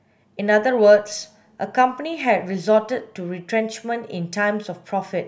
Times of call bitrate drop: none

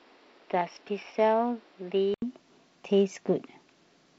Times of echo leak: none

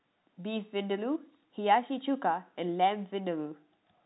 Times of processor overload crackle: none

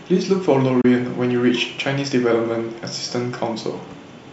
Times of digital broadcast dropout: 0.81-0.85

